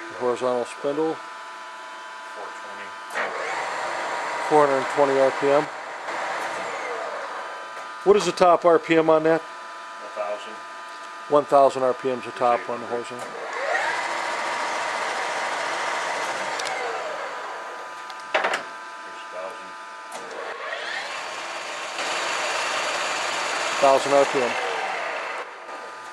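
The audio drops abruptly by about 6 dB three times, at 5.65 to 6.08 s, 20.53 to 21.99 s and 25.43 to 25.68 s. This is likely one channel dropping out before the mono sum, halving the common content.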